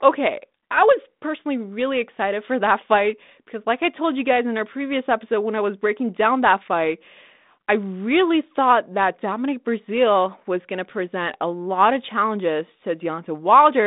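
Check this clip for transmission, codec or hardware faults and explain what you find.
No faults can be heard in this speech recording. It carries the character of a G.726 ADPCM telephone path at 32 kbit/s, with the band limited to about 200 Hz to 3.7 kHz and only light coding noise following the speech.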